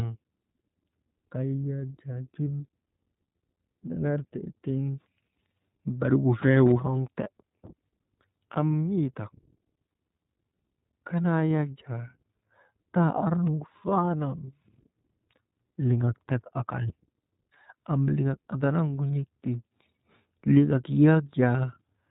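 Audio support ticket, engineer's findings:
iLBC codec, whole clip: speech band-limited, nothing above 4 kHz, slightly rough, synthetic texture. Damage plainly audible, which fits iLBC at around 15.2 kbps with 20 ms frames. Not a plain low-pass: the graininess in the excitation marks it as codec coding.

Lost iLBC frames at 2.59 s (about 40 ms, consistent with two 20 ms frames), 7.24–7.28 s after "barigu fee woroŋte" (about 20 ms), and 19.1 s after "am liŋak andanavgu" (about 20 ms). Symptom: brief held, buzzy-breathy vowel. Decoder repeats the last pitch cycle with noise. Unlike a dropout there is no silence, and clean recovery is immediate because frames decode independently.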